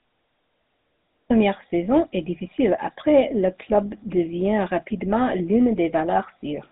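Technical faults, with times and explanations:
Throughout, GSM full-rate codec. The speech carries a plainly audible buzzy, gravelly roughness. The codec models the vocal tract as a filter. It then drives that filter with a sparse train of regular pulses, keeping only one excitation sample in three. The voice texture is rebuilt from too little detail, so it grates. Nothing is heard above 3.8 kHz, which dulls sibilants. The damage fits a 13 kbps stream.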